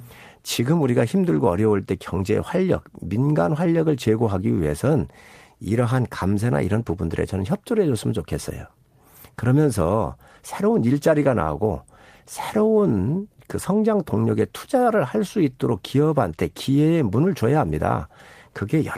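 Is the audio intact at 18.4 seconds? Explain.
Yes, the speech at 18.4 seconds is intact, with no fault heard at that moment.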